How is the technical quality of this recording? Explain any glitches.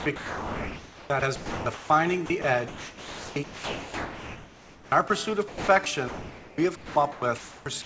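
The recording is choppy throughout, with sound chopped by the voice detector from 0 to 1.9 s, 2.26 to 5.1 s and 5.48 to 7.86 s. In those stretches about 1.5 s, 2.2 s and 1.3 s of audio were replaced by comfort noise, likely because the sender's voice detector kept gating transmission on and off. On a waveform, these show as abrupt flat, low-level patches. On a spectrogram, they appear as featureless noise bands, all sitting below the 8 kHz ceiling that fits a G.722 call path.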